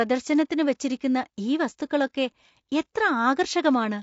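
Throughout the speech, the voice sounds rough and grainy, with noise filling the gaps between harmonics and a thin, synthetic top band. This is likely low-delay AAC compression (AAC-ELD) at a rate near 32 kbps.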